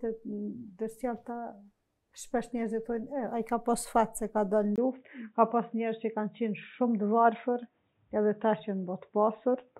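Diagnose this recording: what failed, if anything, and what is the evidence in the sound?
At 4.76 s the sound drops out for about 20 ms. From there to the end it turns dull, with nothing above 3.8 kHz. The level holds, but a faint new noise floor appears. This is likely an input switched to a poorer device at the driver stage.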